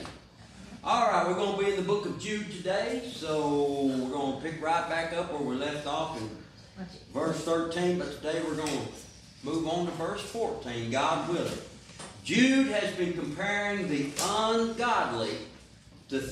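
Nothing technically wrong turns up in this audio; there's no dropout, glitch or distortion to flag at any point.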